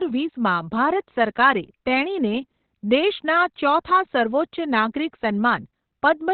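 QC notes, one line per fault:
throughout, Opus compression: the audio has likely passed through Opus in its SILK speech mode at a very low rate, fitting roughly 12 kbps. Bandwidth collapses to narrowband with nothing above 4.3 kHz, leaving the speech muffled, hoarse and heavily damaged.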